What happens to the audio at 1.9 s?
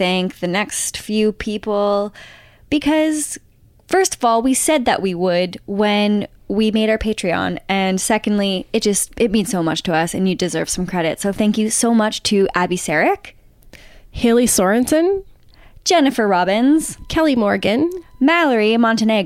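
Nothing goes wrong at 1.9 s: the speech carries on intact through that moment, with no dropout, click or distortion to be heard.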